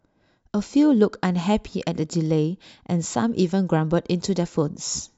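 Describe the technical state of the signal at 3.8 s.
At 3.8 s the speech is intact, with no dropout, click, distortion or other technical fault.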